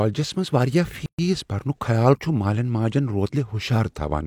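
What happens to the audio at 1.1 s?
Two separately encoded pieces of the speech were joined without trimming the encoder's start-up delay and final-frame padding, leaving a gap at a join of encoded pieces. From 1.06 to 1.19 s the speech drops into a gap of about 127 ms with smeared edges, so the fully silent part is shorter, then resumes exactly where it stopped, at "برنک خیال".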